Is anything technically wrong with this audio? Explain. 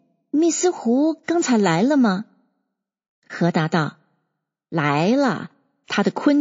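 Yes, two related problems. Throughout the speech there's plainly audible MP3 compression, likely from a low-bitrate encode around 32 kbps. Weak frequency detail flickers between frames, so the audio sounds watery and swirly, with chirpy sibilants and smeared attacks.

There's also pre-echo at 1.23 to 1.28 s and 5.84 to 5.88 s. The encoder stayed on long blocks of about 72 ms, so quantisation noise sized for each sharp attack spilled into the quiet just before it. That gives a hiss lasting 48 ms and 39 ms, rising by about 24 dB and 19 dB, and the attacks sound softened.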